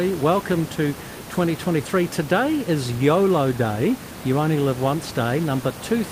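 No technical faults are present in this speech recording; the only thing beneath the speech is the room's own background noise, sitting about 13 dB below it, which belongs to the recording space rather than to the system.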